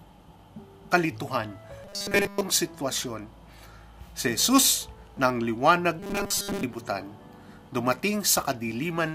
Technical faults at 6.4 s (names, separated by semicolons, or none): robotic sound from repeated short buffers